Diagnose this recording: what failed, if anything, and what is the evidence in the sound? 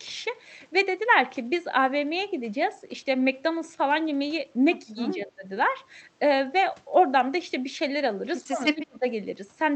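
In call processing, the echo canceller likely mistook double talk for loudspeaker echo and ducked the near-end talker: speech suppressed in double talk. The speech dips about 15 dB at 4.93–4.97 s, about 20 dB at 5.14–5.49 s, and nearly vanishes, about 35 dB down, at 8.43–9.05 s.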